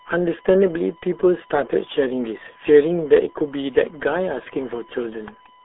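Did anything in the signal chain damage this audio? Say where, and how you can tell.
Yes. In the analogue wiring or power path, a steady USB whine sits at 1 kHz for the whole clip, well below the speech level. The bus's 1 ms frame timing is leaking current pulses through shared power or ground into the audio input, giving a fixed tone.

At the codec stage, the speech has been through the RealAudio 14.4 codec with heavy damage: nothing passes above 3.8 kHz, the band is squeezed to roughly 300 Hz to 3.5 kHz, and the voice is muffled and gargly, consistent with an 8 kbit/s dial-up coder.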